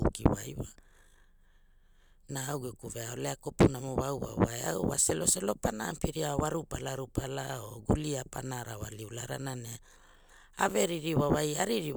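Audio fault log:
Nothing to flag here; the speech comes across without any technical faults worth logging.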